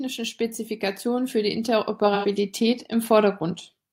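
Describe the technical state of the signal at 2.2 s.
AAC frame loss with concealment spans 2.14 to 2.26 s. About 85 ms of audio, consistent with two missing frames, is rebuilt from the last good spectrum, giving a smeared, noisy patch that appears on a spectrogram as blurred, flattened harmonics.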